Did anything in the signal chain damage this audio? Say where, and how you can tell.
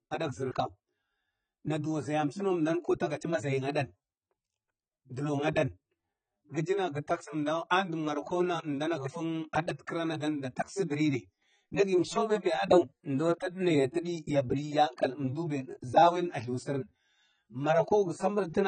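Yes, at the codec stage: the speech throughout has nothing above 9 kHz and a heavy warbling, smeared fizz on sibilants, likely from AAC compression at a rate near 16 kbps. A plain low-pass filter would dull the sound without adding this shifting, metallic texture.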